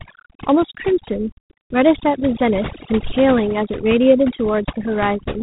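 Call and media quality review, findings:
Overdone noise removal, throughout. Background gated to near silence with twinkling tonal specks. Band-by-band suppression set too aggressive, taking low-level speech detail with the noise. Unlike codec noise, the specks sit in gaps, isolated.

G.726 ADPCM, throughout. Harsh, rasping hiss riding on speech, rising and falling with its level; nothing above 3.9 kHz. Coarse adaptive difference coding, fits 24 kbit/s. Unlike denoising artefacts, the hiss is tied to speech rather than scattered in pauses.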